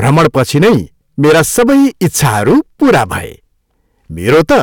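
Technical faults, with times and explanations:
Throughout, hard clipping: overdriven by about 14 dB, so roughly a tenth of samples hit the ceiling. The waveform shows flat-topped peaks and the spectrogram shows harmonic smear reaching high frequencies, heard as harsh fuzz.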